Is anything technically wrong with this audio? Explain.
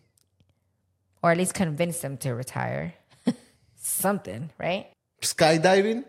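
No technical faults are present.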